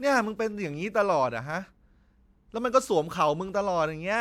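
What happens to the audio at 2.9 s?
Nothing happens to the audio at 2.9 s; the speech continues intact through that moment with no dropout, glitch or other fault.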